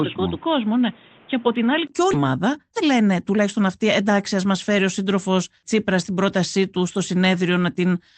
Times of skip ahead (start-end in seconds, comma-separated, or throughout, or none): 2.13-2.15